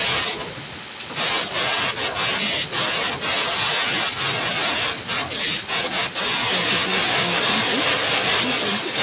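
An echo canceller that likely could not tell its own talker from loudspeaker echo while both sides spoke at once has cut into this speech recording, a case of speech suppressed in double talk. The talker drops by as much as about 40 dB in stretches from 0.8 to 1.93 s, 2.32 to 4.8 s and 5.26 to 6.41 s, with roughly a second, two seconds and a second of sound pushed down or broken into pieces. From 6.55 s to the end at 9 s there is an echo leak, the likely result of a far-end loudspeaker echo getting past cancellation and being sent back. A copy of the voice trails the original by 1.16 s at roughly the same loudness, so the talker overlaps with their own delayed audio. Throughout, the call path passes nothing above 4 kHz, which fits a narrowband codec such as G.711 A-law at 64 kbps.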